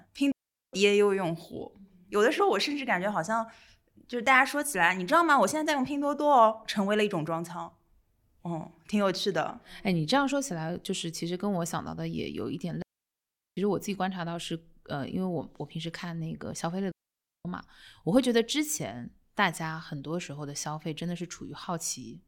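At 0.32 s the speech drops into a clean hole for about 0.41 s, and it happens again at 12.82 s for about 0.75 s and at 16.91 s for about 0.54 s. That's a digital wireless dropout: the radio link lost too much data, so the receiver muted itself with a very quick fade. You get near silence with no crackle or noise burst on either side, just sound, then nothing, then sound again.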